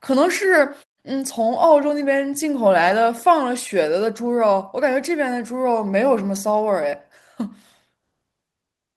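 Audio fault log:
1.69 s and 2.89 s, lost packet rebuilt from error correction: each single 20 ms frame was decoded from its low-bitrate backup copy, so it sounds briefly rougher and noisier; the spectrogram shows smeared, grainier slices with no gap.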